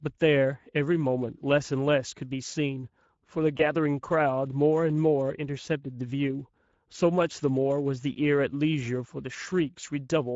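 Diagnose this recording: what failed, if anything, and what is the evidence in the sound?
At the codec stage, the speech passes through the Speex codec, and the damage is plainly audible throughout. With too few bits for the CELP excitation, the voice comes out hoarse and noisy, which fits a rate around 17 kbps.

At the network stage, VoIP packet loss concealed by the speech codec occurs from 3.57 to 3.62 s. The decoder bridged the gap by extending its last pitch and filter at falling gain, so the sound smears briefly into a fading tone or noise. The duration points to a single lost 20 ms frame.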